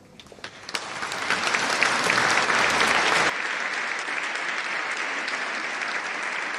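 At 3.30 s the sound abruptly goes duller and about 10 dB quieter, with nothing above 9.8 kHz and faint new background noise, likely an input switched to a poorer device.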